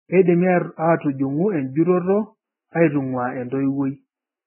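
Throughout, the speech stops at 3 kHz and sounds grainy and hissy, likely Vorbis compression at a low bitrate. A plain low-pass would stay clean.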